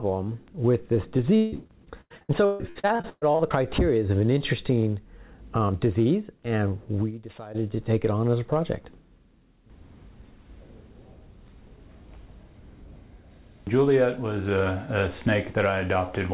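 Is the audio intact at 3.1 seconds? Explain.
No. Repeated packet loss (robotic sound) runs from 1.36 to 3.64 s: holes up to 159 ms, about half the span patched by extending the last sound, recurring rapidly, unlike a single dropout.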